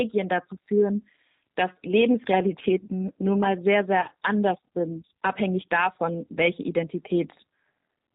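Speech that sounds rough and synthetic throughout, with everything above 4 kHz missing, points to the G.729 codec: the voice is rebuilt from a vocal tract filter, a pitch predictor and a few pulses per frame, which fits an 8 kbit/s G.729A stream. From 4.01 to 4.08 s the voice smears into a brief buzzy or noisy sound that fades, and stays weak just afterwards. This is VoIP packet loss concealed by the speech codec: the decoder stretched its last pitch and filter across about 30 ms of missing audio, fitting roughly three lost 10 ms frames, and then needed time to recover.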